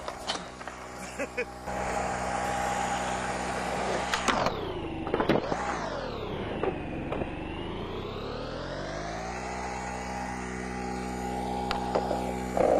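Adaptive stream at a lower bitrate, 5.03 to 11.03 s: treble abruptly turns synthetic and stops above 14.9 kHz as playback switched, without a gap, to a low-bitrate rendition.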